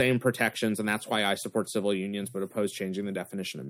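A short bit of speech, and nothing technically wrong turns up anywhere in it.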